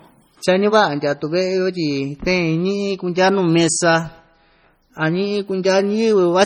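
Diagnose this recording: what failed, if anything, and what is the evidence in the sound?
The fault is at the codec stage and runs through the whole speech clip. The sound is watery and swirly, with a metallic chirp on s sounds and smeared attacks. This is likely MP3 compression, heavily damaged, and it fits a low bitrate around 32 kbps. Weak frequency lines are being zeroed and switch on and off between frames, which makes the swirl. Content stops above 20.8 kHz, so the encoder's treble cut sits very high.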